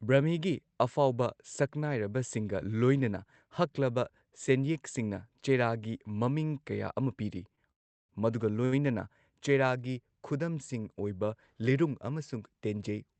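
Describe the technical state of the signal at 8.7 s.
A short stall from a late packet runs from 8.65 to 8.74 s: the buffer ran dry, so the last sound is stretched about 70 ms with a faint buzz or dip. Unlike a dropout, nothing is lost; everything after simply arrives 70 ms later.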